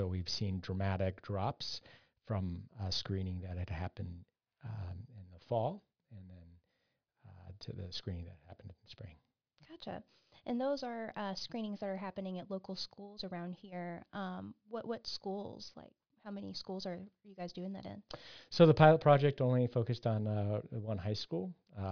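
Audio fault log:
No faults detected in recording.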